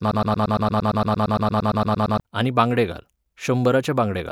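A broken-record loop is already running when the clip begins and lasts until 2.2 s. One 115 ms fragment repeats back to back. A stalled stream likely caused it, and the audio it should have carried is lost.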